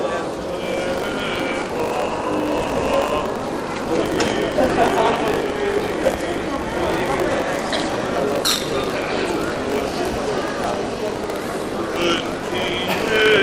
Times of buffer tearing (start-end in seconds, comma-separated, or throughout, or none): 0.62-13.43